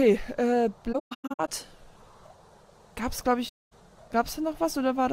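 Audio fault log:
0.92–1.49 s, AAC frame loss with muting: the decoder zeroed lost frames, leaving soft-faded gaps totalling 384 ms, the longest around 150 ms.
3.48–3.73 s, AAC frame loss with muting: 235 ms of frames were lost and zeroed, so overlapping windows fade the sound out and back in.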